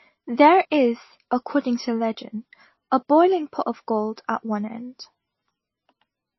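MP3 compression damage runs throughout the speech, from start to finish. Nothing is heard above 5.8 kHz, so the treble is cut at a fixed point and sibilants lose their edge. The likely cause is an MP3 encoder starved of bits, at a rate that fits roughly 23 kbps, which zeroes weak frequency lines so they flicker on and off between frames. The result is a plainly audible watery, swirling texture with smeared consonant attacks.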